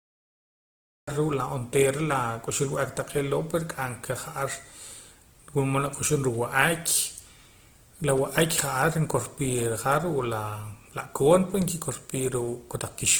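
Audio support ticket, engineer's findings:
Opus compression, whole clip. Speech sounds grainy and rough, with noisy texture where tones should be clean. Codec damage plainly audible. Bandwidth stays wide, with content up to about 20.2 kHz. Likely cause: Opus in CELT music mode at a low bitrate, fits around 16 kbps. Band energy is kept, but starved bands are filled by folding or noise. Hence grain, not swirl.

Cut-off start, 0 to 1.08 s. Digital silence, then sound begins abruptly at 1.08 s, mid-sound. No natural attack, no fade-in. Probable component: recorder or stream start-up. Capture began late, so the onset was never recorded. The audio enters already in progress.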